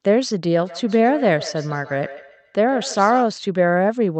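From 0.67 to 3.34 s there is feedback echo between two devices: one device replays the other's microphone feed, which is picked up again, repeating the speech roughly every 150 ms at up to about 15 dB below it. The spectrogram shows faint, evenly spaced copies trailing each syllable, and the waveform shows small echoing bursts after each onset.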